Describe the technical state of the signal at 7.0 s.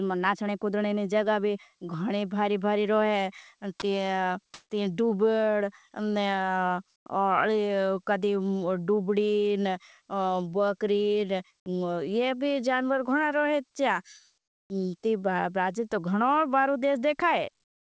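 From 6.96 to 7.06 s, about 100 ms of the background is replaced by smooth, featureless hiss roughly 13 dB quieter, likely comfort noise from discontinuous transmission filling a gap. On a spectrogram it appears as a flat, textureless band below the 8 kHz ceiling of the G.722 path. The waveform shows a brief low, even stretch.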